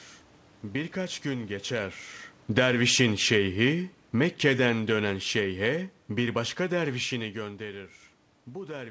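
From 2.42 s, just after "gün geçer", automatic gain falling sets in: the gain control judges the input too loud or its background noise too strong and eases it down by about 8 dB until 7.06 s. Unlike a talker moving away, the room noise sinks together with the speech.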